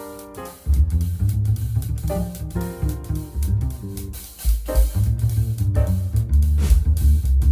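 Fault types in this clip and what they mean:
Nothing stood out on listening that would mark a technical fault anywhere in the audio.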